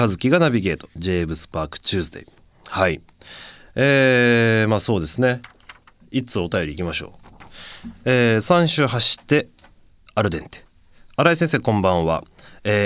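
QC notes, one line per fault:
No faults found in the speech recording. Nothing in it needs a timed entry.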